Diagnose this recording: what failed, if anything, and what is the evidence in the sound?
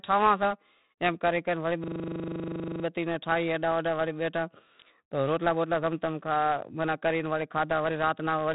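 The codec stage failed: the speech was stored with 4-bit ADPCM compression, heavily damaged. A gritty hiss rides on every loud syllable, attacks sound roughened, and nothing remains above 3.9 kHz, which fits a 32 kbps stream at an 8 kHz sample rate.

A driver or buffer fault follows: a system hang loop, where the computer stalled while the hardware kept replaying its ring buffer. After "ایم کرے کرے وڑے", a 40 ms fragment repeats 25 times at 25 Hz, a buzzing stutter from 1.84 to 2.84 s, before "بتی ناں" resumes with practically nothing missing.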